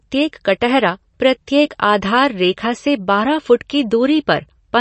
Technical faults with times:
0.00-4.81 MP3 compression

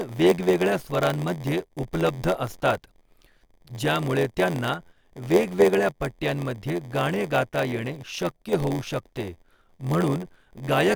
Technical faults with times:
0.00-10.95 block size mismatch (padded)

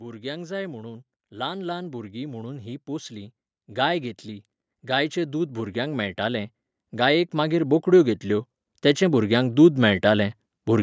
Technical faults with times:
0.05-4.23 automatic gain rising
4.81-10.78 automatic gain rising

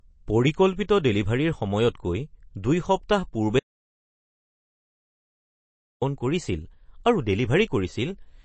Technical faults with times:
0.00-8.45 MP3 compression
3.59-6.02 audio dropout to silence

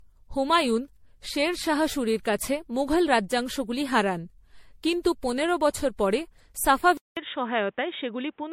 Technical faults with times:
0.00-8.52 generation loss
6.97-8.52 input switched to a poorer device

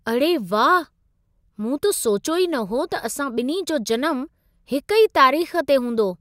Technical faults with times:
none

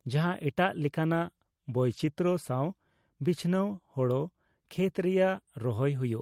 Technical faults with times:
1.93-2.07 lost packet rebuilt from error correction

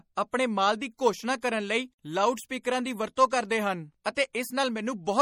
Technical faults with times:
0.00-5.21 MP3 compression

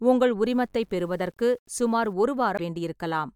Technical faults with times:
0.46-2.13 low bit depth without dither
2.55-2.60 damaged data in a compressed stream

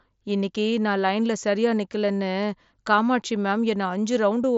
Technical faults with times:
none

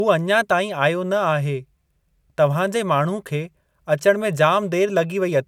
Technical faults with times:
none

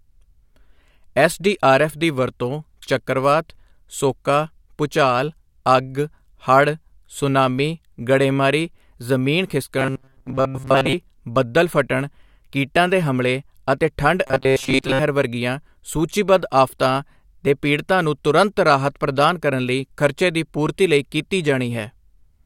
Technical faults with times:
9.79-10.94 robotic sound from repeated short buffers
14.27-14.99 robotic sound from repeated short buffers

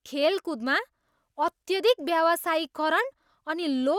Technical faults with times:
none

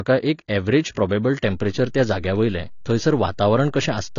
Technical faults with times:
0.00-4.18 low-bitrate audio saved at a high bitrate
1.45-4.18 DC step

